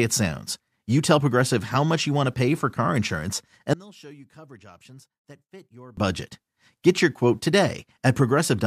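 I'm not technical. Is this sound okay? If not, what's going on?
No. Right after "pay for car insurance", from 3.73 to 5.97 s, the speech suddenly drops to a faint whisper. The likely cause is one channel inverted, so the two sides cancel each other out.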